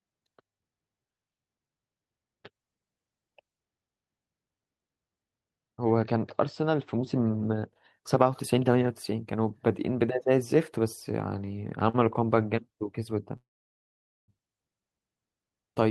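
A speech recording carried over a call codec path, with the top end stopping around 12 kHz. Two short stalls from a late packet occur: at 11.45 to 11.49 s and 11.89 to 11.96 s, packets arrived after their due time and the jitter buffer ran dry, so the receiver stretched the last sound by 20 ms and then 44 ms, giving brief held moments with a slight buzz or dip and nothing lost. From 13.37 to 14.30 s there is a call audio freeze, likely from packets held up in the network emptying the buffer: the last sound trails off and then about 0.85 s of silence follows, inserting a gap of roughly 0.91 s before the speech resumes where it stopped.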